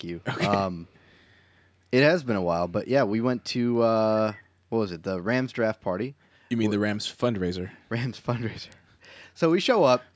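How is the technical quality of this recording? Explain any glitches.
One glitch stands out: a faint echo leak from 0.87 to 1.19 s. A ghostly copy of the speech trails it by 310 ms, very quiet, most likely the far end's echo canceller letting loudspeaker sound slip back through its microphone. On a spectrogram it shows as a weak, smeared repeat of the preceding speech shapes; the waveform barely changes. The spectrum stops at 8 kHz, consistent with call microphone processing.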